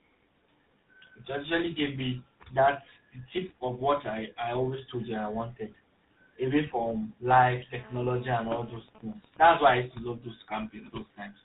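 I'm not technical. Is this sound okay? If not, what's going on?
No, it isn't quite okay. There are three separate problems, one running through the whole clip and two short ones near the end.

The first is tandem speech coding, and you hear it the whole way through. The call crossed links that each squeeze the voice with their own coding system, and it was coded again at each handover. The last stage was the old GSM mobile format. Each stage works on the already damaged output of the one before, so the speech ends up rougher, more muffled and more warbly than one link alone would make it. Nothing above about 3.8 kHz survives, which is why it sounds so dull.

The second is GSM phone buzz, from 7.79 to 8.80 seconds. A 2G mobile phone near the equipment was on a call, and its radio transmits in pulses about 217 times a second. The audio circuitry picks those pulses up and turns them into sound, giving a hard, raspy, steady buzz. 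It has nothing to do with what's being said. It's just radio interference leaking in.

The third is GSM signalling bursts, from 8.88 to 9.73 seconds. It's a 2G phone on a call whose user has gone quiet. In that state the phone only sends short groups of radio pulses instead of a continuous stream. The circuitry picks these up too, so instead of a steady buzz you get even ticks with a longer buzz twice a second, a bit softer than the buzz just before it.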